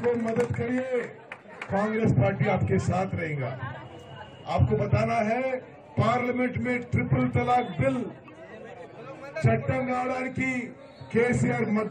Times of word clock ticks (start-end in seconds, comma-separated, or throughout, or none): none